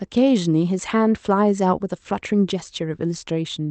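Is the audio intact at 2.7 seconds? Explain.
Yes, the speech at 2.7 seconds is intact, with nothing at that moment beyond the ordinary character of the call path it passed through.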